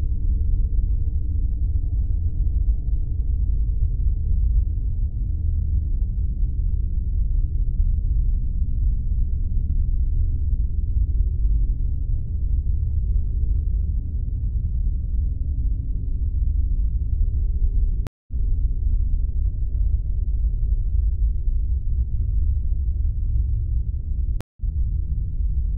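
At 18.07 s the audio cuts out for about 208 ms, and at 24.41 s for about 165 ms. Each is a stream reconnect: the connection dropped, the player reconnected, and a fresh decoder picked up mid-stream. Unlike a simple dropout, the sound doesn't resume where it stopped. It jumps ahead by roughly a fifth of a second, so material is skipped, and it eases back in through a brief muted or faded opening rather than restarting abruptly.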